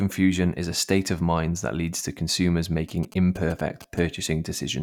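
After "that leads to consumers", from 2.89 to 3.99 s, GSM signalling bursts gallop through as rectified short 217 Hz buzzes, grouped rather than a call's steady buzz.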